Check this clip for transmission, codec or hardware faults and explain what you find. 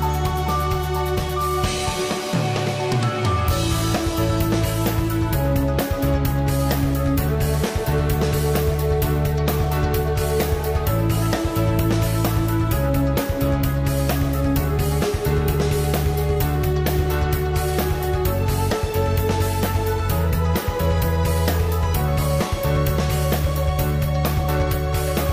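Nothing stood out on listening to this clip.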